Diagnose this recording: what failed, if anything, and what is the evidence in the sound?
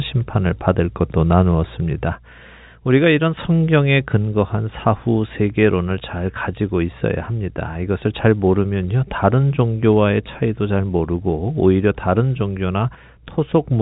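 Nothing failed in this recording; the sound simply carries the narrow telephone band of G.711 coding, with nothing above about 3.8 kHz.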